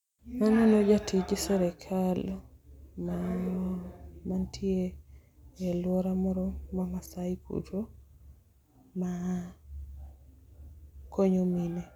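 No technical faults are audible.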